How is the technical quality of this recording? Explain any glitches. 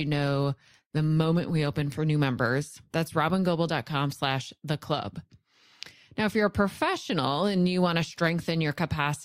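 The recording opens at reduced quality and then improves abruptly. An adaptive stream starting at a low bitrate accounts for the first 2.0 s: the player began on a lean version of the stream to start quickly, then switched to a richer one once it had gauged the connection. Until 2.0 s the speech sounds dull, with thin or artificial-sounding treble and more obvious codec smearing. Right before "new members" the clarity jumps up with no gap, which fits a step from roughly 32 to 64 kbit/s Opus.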